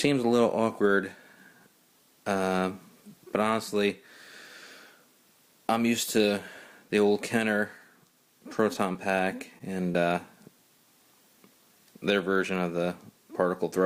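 Between 8.73 and 10.01 s there are scattered short gaps: around five brief dropouts spread across that stretch, each no longer than about 20 ms, consistent with isolated lost or late packets. The receiver concealed each hole by extending the preceding sound, roughly 70 ms in total or about 7% of the span. Because 60 ms went missing and 22 ms were added, the timing shifts slightly. The patches are audible as small ticks, smears and momentary hiccups in otherwise continuous sound.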